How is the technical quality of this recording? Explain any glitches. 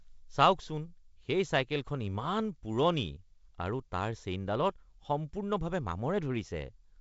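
Nothing stood out on listening to this speech, which comes through as wideband telephone audio with a light upper-band hiss and no content above about 7.7 kHz.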